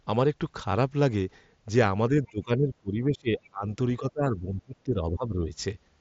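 From 2.1 to 3.66 s the voice keeps sinking, around a second in total, at worst by about 25 dB. It recovers briefly, then from 3.99 to 5.5 s sinks again for most of that stretch, by up to about 20 dB. That pattern is likely speech suppressed in double talk: with both ends talking, the echo canceller couldn't tell this voice from the loudspeaker's echo and pulled both down, all over the wideband mSBC headset band that stops near 7.7 kHz.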